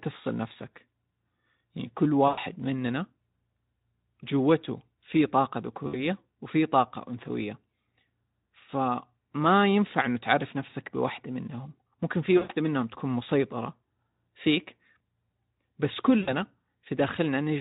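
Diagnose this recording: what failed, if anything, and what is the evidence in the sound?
VoIP packet loss concealed by the speech codec occurs at 2.27, 5.87, 10.69, 12.37 and 16.21 s, a network-stage fault. The gaps last 100, 60, 40, 120 and 60 ms, which fits runs of about two to six 20 ms frames going missing. The Speex decoder, running at 15 kbps with light coding damage, bridges each gap by extending its last pitch and filter at falling gain. The speech smears into a buzzy tone or coloured noise that fades, and stays thin briefly after packets return.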